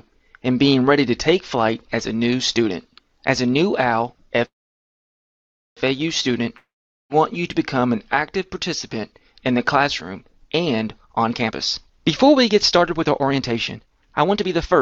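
At 4.45 s the sound stalls until 5.79 s in a call audio freeze: after a brief fading continuation, about 1.27 s is silent, then playback resumes where it stopped. Nothing is lost; the likely cause is delayed packets emptying the jitter buffer, adding 1.31 s of delay.

From 6.57 to 7.12 s comes a long network dropout. The last sound trails off briefly, then about 0.44 s of silence follows, and the audio returns further along with roughly 0.54 s skipped, likely because that stretch of packets never arrived.

From 11.00 s to the end, a jitter buffer speed-up plays the sound at 128% speed with unchanged pitch, so it sounds rushed. The receiver was trimming excess buffered delay by cutting many short pitch-period fragments, removing around a second altogether.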